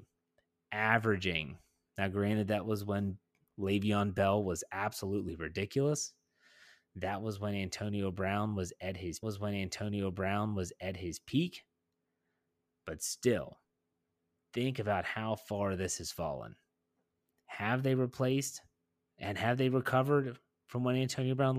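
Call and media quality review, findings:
Stream segment repeated, 9.22–11.22 s: about 2.0 s of speech plays a second time, with a small blip at the jump back before the repeat. Probable component: player fetch/queue logic. Mechanism: the same media segment was requested or enqueued twice and rendered back to back, so the programme runs about 2.0 s longer than real time from that point on.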